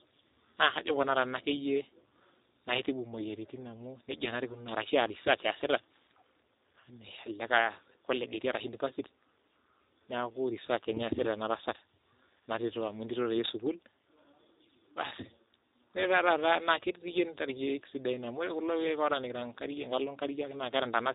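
From start to finish the speech carries G.729 codec damage, plainly audible and consistent with 8 kbit/s G.729A. Each frame is resynthesised from a vocal tract model and a few excitation pulses, so the voice sounds rough and synthetic, with nothing above about 3.8 kHz.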